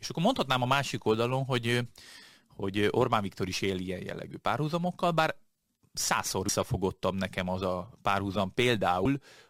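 Compressed frames skipped at 6.48 s, just after "jellegű párhuzamokkal bár százszor", and again at 9.05 s. Each time, several consecutive frames of the encoded stream were never played, either missing from the file or rejected by the decoder as damaged. The speech lurches ahead by roughly a tenth of a second at each spot, which fits a handful of frames about 24 ms long, and a short artefact marks the join.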